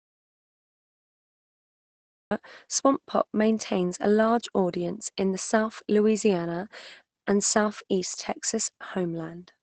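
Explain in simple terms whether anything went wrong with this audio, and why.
Two things went wrong here. First, there's an audio dropout to silence. The clip opens in dead silence, with not even room hiss, and the speech only kicks in at 2.31 s with "swamp pop maintains a". The gap was already under way when the recording starts. That kind of total silence usually means the input was lost for a moment, most likely a dropped connection or a mute, while the recorder kept writing nothing, so whatever came before is gone.

Second, the whole clip has Opus voice compression on it, and you can plainly hear it. The voice sounds a bit muffled and hoarse, with a slightly robotic edge. That's because the encoder was squeezing the speech hard in its speech-focused mode, coding the buzz of the voice only roughly and throwing away everything above about 8.7 kHz. That's why the crisp, airy top end of consonants is missing throughout.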